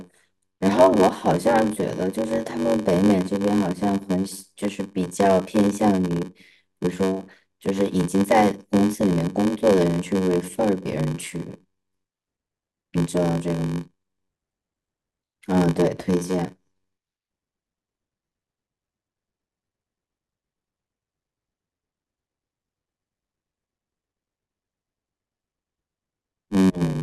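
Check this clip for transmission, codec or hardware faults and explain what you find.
There is one fault, present for the whole clip: a block size mismatch with zero padding. One stage delivers blocks shorter than the next stage reads, and the shortfall is filled with silence, which fits a 512-sample read block. The short gap in every block causes a 93.8 Hz buzz under the speech, which runs at 0.861 times normal speed but at about its normal pitch. On a waveform, regular flat dropouts appear; a spectrogram shows thin vertical gaps and harmonic lines spaced 93.8 Hz apart.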